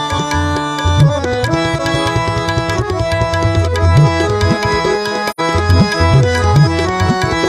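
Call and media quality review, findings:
AAC frame loss with muting, 5.30 to 5.40 s. Soft-edged dropout of about 85 ms, consistent with two lost frames. Decoder zeroed the missing spectrum; overlapping windows fade the audio out and back in.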